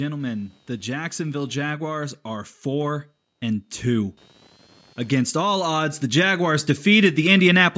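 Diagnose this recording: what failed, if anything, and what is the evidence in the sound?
Computer activity noise sits under the speech for the whole clip. This is an analogue wiring fault. A faint buzzing chirp pulses at around 200 times a second, well below the speech level. It follows the machine's workload, not the talker. Processor, graphics or mouse load shifts the ground that the audio circuit shares, and that ripple leaks into the microphone path. A separate ground or a USB isolator would remove it.

Automatic gain rising is heard twice, and this is the call processing stage. From 0.83 to 4.21 s the level climbs by about 6 dB. From 5.08 to 7.73 s it climbs again, by about 7 dB. Speech and the background noise swell together over several seconds. The gain control judged the input too quiet and raised its gain gradually. The band cut-off near 8 kHz is ordinary for a call microphone path.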